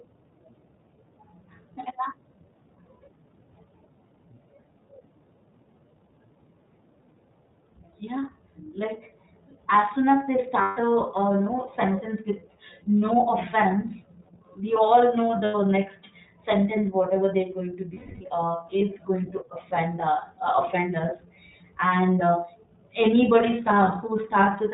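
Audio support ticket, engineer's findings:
iLBC codec, full length of the speech. Band-limited, nothing above 4 kHz; slightly rough, synthetic voicing. Consistent with the 13.33 kbps, 30 ms frame mode, where each frame's excitation is coded independently. Damage plainly audible.

Lost iLBC frames at 10.61–10.77 s (150 ms), 15.44–15.55 s (90 ms) and 17.94–18.22 s (270 ms). Held, buzzy vowel-like fill, fading on the longest. Decoder concealment repeating the last pitch cycle with noise. Fits five, three and nine missing packets. Speech recovers immediately after each.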